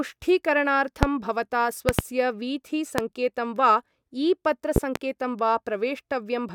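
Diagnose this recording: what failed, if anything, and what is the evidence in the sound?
Loud pops at 1.03, 1.89–2.02 (double), 2.98 and 4.76–4.99 s (double), about 20–25 dB over the speech: likely analogue-wiring transients, shown as waveform spikes and vertical spectrogram lines.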